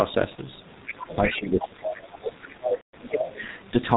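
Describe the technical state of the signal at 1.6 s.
At 1.6 s the speech is passing through the G.723.1 codec, as it does for the whole clip. The coder packs the voice into 30 ms frames at a very low rate, consistent with about 6.3 kbit/s, discards everything above 4 kHz and tracks the vocal tract only coarsely. The result here is heavy damage: a dull, boxy, hoarse voice with smeared consonants.

This moment also falls inside a stretch from 1.14 to 3.43 s where the speech is suppressed in double talk. The likely cause is that both ends were talking together, so the echo canceller could not tell the near talker from loudspeaker echo and pulled the whole signal down. Across the span the voice dips, with the level dropping by as much as roughly 20 dB.

Right at 1.61 to 1.69 s, the other side's voice is leaking through. The far-end talker, played over the near device's loudspeaker, likely reaches the microphone, and the echo canceller fails to remove it. 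For those 80 ms a second voice, about 10 dB below the main speech, slips into the signal as a brief fragment.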